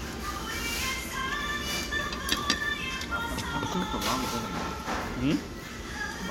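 At 3.72 to 3.74 s, a corrupt frame decoded: damaged bits in a couple of compressed frames were played as if valid, throwing energy into the wrong frequencies. It sounds like a short chirp, squeak, blip or burst of noise reaching around -20 dBFS, seen as a brief, misplaced vertical smear on a spectrogram.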